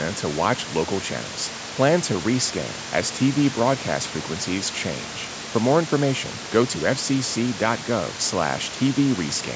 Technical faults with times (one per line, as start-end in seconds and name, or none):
none